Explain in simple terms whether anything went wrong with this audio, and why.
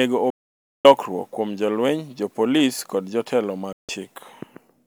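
Twice the speech just vanishes: from 0.30 to 0.85 s, about half a second, and again from 3.73 to 3.89 s. That's a digital broadcast dropout. The receiver lost clean data and muted until good frames came back, so whatever was sent then is gone.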